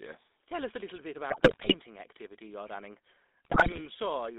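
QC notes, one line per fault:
Throughout, GSM full-rate codec: the speech has that gravelly, buzzy roughness you get when the voice is rebuilt from a vocal-tract filter fed by a thinned-out train of excitation pulses, and the codec damage is plainly audible. The band is squeezed to roughly 250 Hz to 3.7 kHz, so the top end is gone and the low end is thin. The whole thing sounds like a phone call from a GSM handset at 13 kbps, which is just what this codec produces.
1.30 to 1.75 s, GSM bit errors: right after "us a little bit" the speech breaks up into squawks, pops and a gargling smear before "activity you're running" comes back. Corrupted bits are landing in the decoder's filter, pitch and gain parameters at a rate of about 6 percent, so frame after frame gets a bent spectrum or a sudden jump in level.
3.45 to 3.84 s, GSM bit errors: the same kind of breakup shows up again later, after "activity you're running", at an error rate of about 4 percent. 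It's a touch milder than the first burst but you still hear the squawky, gargled texture where scrambled pitch and gain values throw individual frames off.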